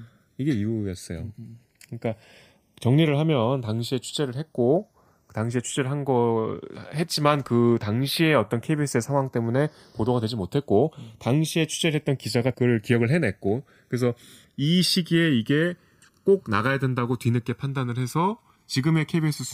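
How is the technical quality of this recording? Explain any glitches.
The quality is compromised by one fault running throughout. Channels drifting apart: the two sides run on slightly mismatched clocks, roughly 70 ppm. Their offset grows to about a millisecond. In mono, sweeping comb notches give the speech a slow flanging swirl.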